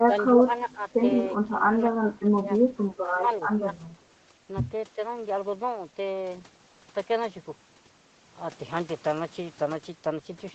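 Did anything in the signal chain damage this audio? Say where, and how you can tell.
Yes, at the call processing stage, where the echo canceller likely suppressed speech in double talk. The level dips at 0.06–0.13, 0.34–0.49, 0.69–0.83, 2.02–2.46, 2.65–2.99, 3.57–3.64, 3.93–3.98 and 4.95–5.0 s. The drops run from about 5 dB to about 15 dB, deepest near 2 to 3 s. The canceller heard both ends at once, mistook the talker for echo, and turned the microphone down.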